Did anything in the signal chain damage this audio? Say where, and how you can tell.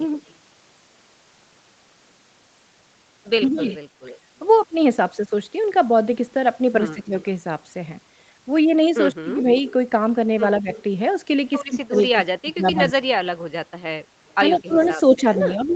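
Yes. Echo leak in call processing: a faint copy trailing the voice by 154 ms, about 30 dB down at 0.12–0.33 s, about 20 dB down at 3.54–3.77, 9.68–12.07 and 14.29 s onward. The fixed delay rules out room reverb; likely an incomplete echo canceller.

Speech suppressed in double talk, likely from the same canceller: the talker dips about 15 dB at 3.43–3.66 and 6.94–7.15 s, and up to about 25 dB from 9.14 s on. The dips are ducks, not hard network dropouts.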